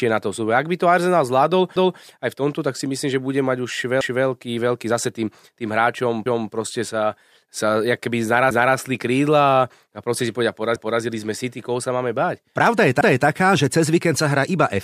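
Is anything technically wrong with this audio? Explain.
Yes. Overlapping chunks cause brief stutters, each replaying about 250 ms, at 4.01 s (after "že bude mať už", before "veľký zase tým tým"), 6.26 s, 10.76 s (after "proste si povedia") and 13.01 s (before "že cez víkend sa"). The speech was handled in blocks that fits 2-second chunks, and each block began 250 ms before the previous one ended, so that slice plays twice at every join.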